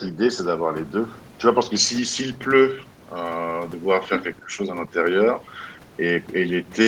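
From 4.38 to 4.58 s the speech dips sharply, by around 20 dB. This is speech suppressed in double talk. The likely cause is an echo canceller ducking both talkers.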